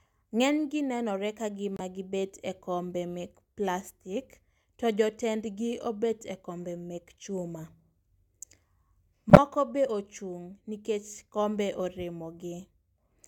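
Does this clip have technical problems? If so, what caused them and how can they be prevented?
Yes. Two corrupt frame decoded events occur, at 1.77–1.80 s and 9.30–9.38 s. Damaged compressed frames were played anyway, and misread data put energy at wrong frequencies, producing brief glitches. The second is much louder. A spectrogram shows short vertical smears and the waveform shows sudden spikes. Checksums that conceal failed frames would prevent this.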